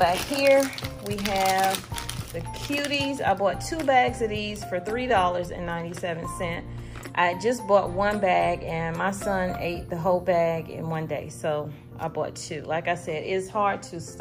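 Nothing in the audio stood out as a technical problem on listening.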